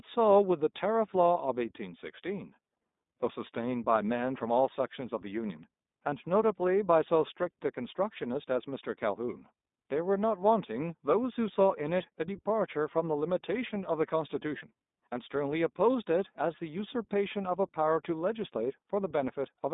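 Throughout, the speech sounds thin, slightly rough and synthetic, with nothing above about 3.7 kHz or below 200 Hz. This is plainly audible iLBC codec damage. Each frame's excitation is coded independently, and the grain fits the 20 ms, 15.2 kbps mode.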